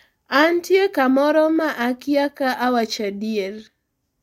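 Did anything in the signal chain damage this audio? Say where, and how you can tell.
No, nothing in the chain audibly damaged this speech.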